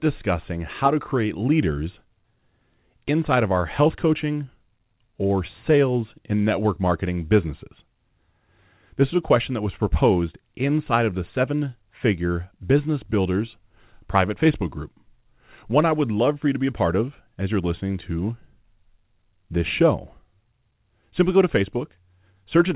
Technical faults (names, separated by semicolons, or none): short concealed packet loss